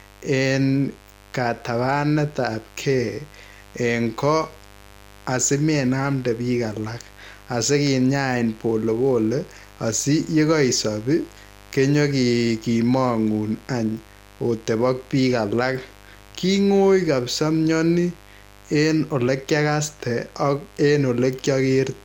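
Mains buzz runs throughout the speech. Switching spikes from the 50 Hz supply leak in twice per cycle, leaving a raspy buzz about 25 dB below the voice.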